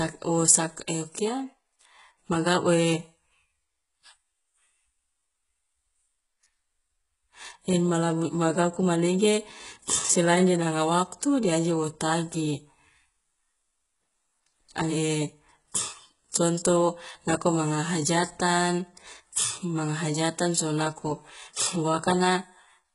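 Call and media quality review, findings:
Gritty, lispy sibilants throughout, with bright but synthetic treble cut off near 11.1 kHz. Likely HE-AAC compression, fitting about 12 kbps. Treble is replicated upward, not dulled as with a plain low-pass.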